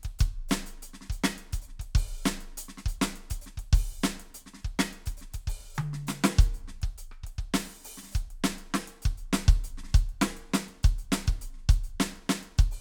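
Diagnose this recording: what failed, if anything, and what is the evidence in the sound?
Nothing in the music points to a failure at any stage of the chain.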